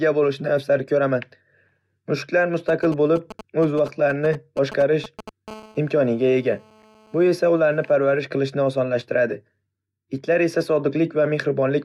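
Speech carries two kinds of mobile-phone interference. From 2.69 to 5.29 s there are GSM signalling bursts: a nearby 2G phone's short radio bursts are rectified by the audio circuit into a galloping dit-dit-dit of short 217 Hz buzzes, roughly 15 dB below the speech. On a spectrogram they appear as short clusters of vertical stripes with a harmonic comb. From 5.48 to 7.96 s, ending just before "qilishni osonlashtiradi", a steady GSM phone buzz sits about 27 dB below the speech. This is the continuous 217 Hz burst rate of a phone in a call, rectified into a raspy tone. It shows as unbroken horizontal lines at 217 Hz and its multiples, with a regular pulse train in the waveform.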